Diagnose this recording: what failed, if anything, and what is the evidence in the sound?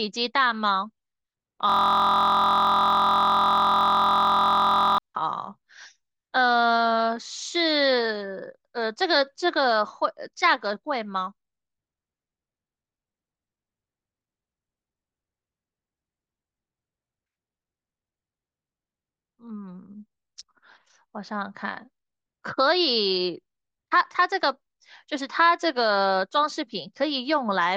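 Driver or buffer stage: a system hang loop from 1.70 to 4.98 s. One 23.22 ms slice repeats about 140 times, making a steady 43.1 Hz buzz that fits a 1024-sample ring buffer cycling during a freeze. The waveform shows one identical cycle tiled end to end; the spectrogram, a 43.1 Hz harmonic comb.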